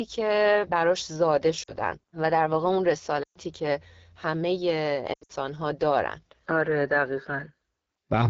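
This speech clip was carried through the AMR wideband (HD Voice) codec at one of its lowest rates, with a raspy, rough texture that fits about 8.85 kbit/s. At that rate the pulse-driven vocal tract model cannot describe the voice below 6.4 kHz finely enough, and the band from 6.4 to 7 kHz is only shaped noise. The result is plainly audible coding damage across the whole recording, a grainy, hoarse quality. On top of that come three bursts of lost AMR speech frames, where corrupted frames failed their checks and the decoder filled the gaps by repeating its last good pitch and vocal tract settings at falling gain. At 1.63 to 1.73 s a 40 ms loss, fitting two frames, gives a short dip. At 3.24 to 3.38 s a 120 ms run drops the sound to near silence within two frames before it returns weak and rough. At 5.13 to 5.33 s, 140 ms of losses scattered over 160 ms, the longest run 80 ms, cause a stuttering mix of fades and brief recoveries.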